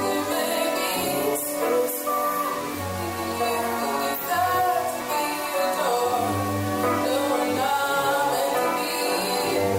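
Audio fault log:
throughout, low bit depth without dither: the audio was likely rounded to very few levels without dither, fitting about 4 bits, so error tracks the signal, leaving grainy distortion roughly 15 dB down.
5.01 s, 7.57 s, 9.07 s, compressed frames skipped: the decoder lost frames and jumped ahead around 70 ms, fitting three 20 ms frames.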